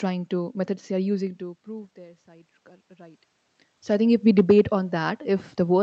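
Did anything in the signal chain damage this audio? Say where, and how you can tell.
Yes. Automatic gain rising, 1.38 to 3.27 s, in call processing: the input fell about 24 dB, so gain crept up about 5 dB, swelling voice and room noise together.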